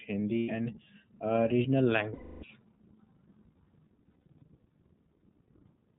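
Speech coded through the iLBC codec, with plainly audible damage throughout: the sound is band-limited to narrowband, so a spectrogram shows a hard ceiling with nothing above 4 kHz, and voiced parts carry a slightly rough, synthetic edge. The texture fits iLBC at about 15 kbps with 20 ms frames, each frame's excitation coded on its own. Lost iLBC frames then break in three times. From 0.38 to 0.50 s about 100 ms is missing. From 2.14 to 2.45 s about 280 ms is missing. Between 4.06 and 4.42 s about 200 ms of losses is scattered across 0.36 s, the longest single gap around 70 ms. In each gap the decoder repeats the last pitch cycle blended with noise, heard as a held, buzzy-breathy vowel. On a spectrogram these stretches look like flat, smeared harmonic bands without normal formant movement. In the waveform they show as a repeating periodic pattern that fades during the long 2.14 s loss. 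Because iLBC frames stand alone, clean decoding returns almost immediately after each gap.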